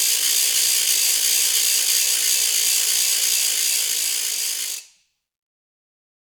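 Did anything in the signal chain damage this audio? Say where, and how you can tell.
No, nothing in the signal chain damaged this music.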